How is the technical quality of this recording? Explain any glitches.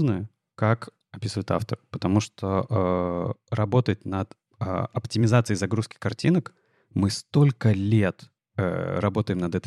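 No glitches are audible anywhere in the recording, so there is nothing to explain.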